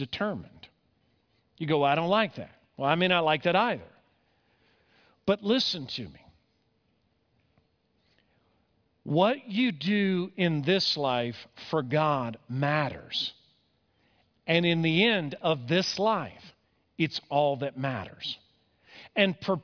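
No technical faults can be heard anywhere in the recording. The speech continues without any audible break or disturbance.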